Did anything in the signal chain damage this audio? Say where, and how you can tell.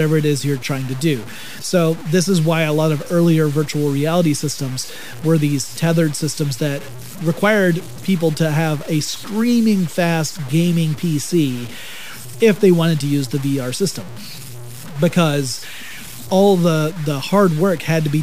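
Yes. The damage most likely happened at a sample-format conversion stage, where the speech was cut down to about 6 bits by plain truncation, with no dither. The result is low bit depth without dither, present throughout the clip. Because the rounding error tracks the waveform, the speech carries a grainy, gritty distortion that shifts with every syllable. The distortion sits only about 20 dB below the signal. Quiet tails and pauses break up into sputtering steps or drop straight to silence.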